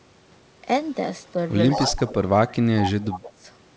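At 1.27 to 1.31 s a faint echo leak appears, about 40 dB below the speech. It returns far more strongly from 1.7 to 2.12 s, at about 5 dB under the voice. Further echo follows at 2.8 to 2.9 s (again about 5 dB down) and at 3.11 to 3.29 s (about 15 dB down). Each time it is a distinct copy of the sound trailing 171 ms behind. That points to a loudspeaker on one side of the call whose echo canceller likely failed to remove what its microphone picked up. Unlike room reverberation, this is a discrete repeat, not a smooth decay.

Overlapping this, from 1.73 to 3.45 s, comes speech suppressed in double talk. The voice dips and drops out in pieces, for about a second in total, falling by as much as roughly 25 dB. Likely because the canceller could not separate the talker from the returning echo, it pulled the level down on both.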